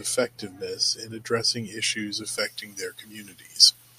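From 2.38 s, pre-emphasis left on: the treble boost was never undone, lifting 10 kHz about 11 dB, so speech sounds thin, bright and sibilant.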